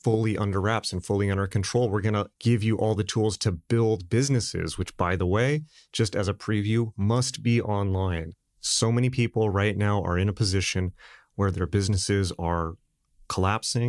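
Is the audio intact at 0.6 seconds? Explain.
Yes, the speech is intact at 0.6 seconds, with no audible fault at that moment.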